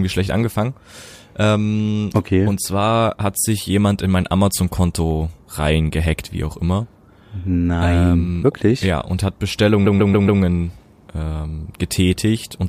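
From 9.85 to 10.40 s the speech stutters from repeated frames: a 139.3 ms block of compressed audio was decoded again, playing four extra times back to back. The duplicated data adds 557.3 ms to the clip, heard as the same fragment looping rapidly.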